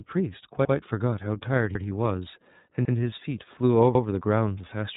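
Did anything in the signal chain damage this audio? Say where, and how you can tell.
Yes. The iLBC codec damaged the clip throughout at the codec stage. Nothing above 3.8 kHz survives, and the speech sounds plainly rough and synthetic. Each frame's excitation is coded independently, which fits iLBC's 30 ms frame mode at about 13.33 kbps.

Overlapping chunks also damaged the clip, at the driver or buffer stage. There are stutters at 0.65, 1.75, 2.85 and 3.95 s, where about 100 ms repeats each time. Each new 1-second chunk starts before the previous one ends, so the shared segment plays twice at every join.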